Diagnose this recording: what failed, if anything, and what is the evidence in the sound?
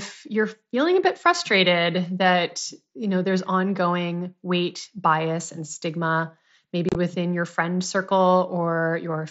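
Unconcealed Bluetooth headset packet loss on the headset radio link: after "weight bias and stigma", 6.89 to 6.95 s, 45 ms drops into abrupt, unfilled holes, the longest 30 ms.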